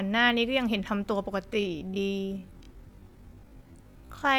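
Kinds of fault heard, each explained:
Time-stretched section: From 1.39 s to the end, the speech abruptly slows to half pace while its pitch holds steady. The likely cause is software lengthening the audio by repeating short pieces to preserve pitch.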